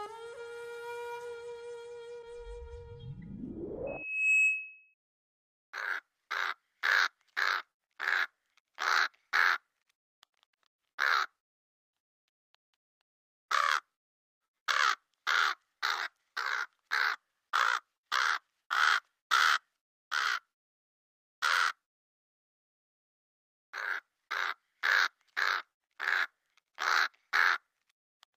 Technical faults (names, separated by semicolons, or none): loudspeaker feedback squeal